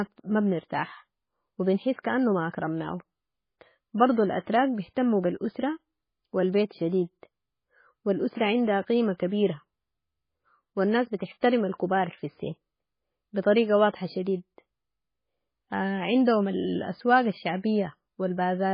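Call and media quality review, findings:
Whole clip: speech dull, nothing above 5 kHz. Heavy watery, swirling texture; s sounds metallic and chirpy. Likely MP3 compression at a very low bitrate, around 16 kbps. Encoder starves, cuts treble, zeroes weak frequency lines frame to frame.

At 11.41 s: brief hiss just before a sharp attack, about 17 ms long. Attack soft, smeared. Pre-echo from the same transform codec. Quantisation noise spread across the whole block, filling the quiet gap ahead of the onset.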